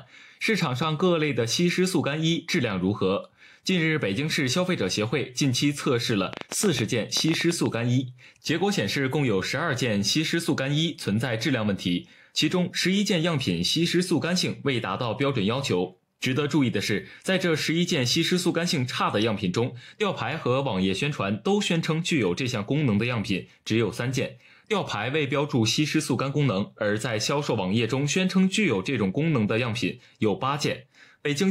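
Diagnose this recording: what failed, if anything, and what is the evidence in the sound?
A train of clicks from 6.33 to 7.67 s: about fifteen similar pulses at an uneven 10.6 per second, standing well above the sound, likely interference pickup in analogue wiring.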